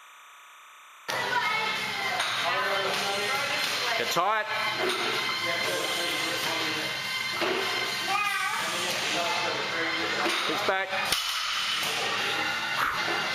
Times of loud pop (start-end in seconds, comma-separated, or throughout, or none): none